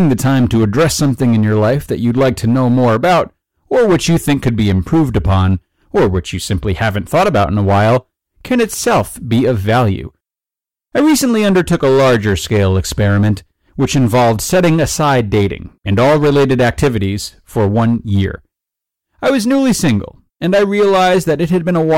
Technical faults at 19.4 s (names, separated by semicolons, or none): hard clipping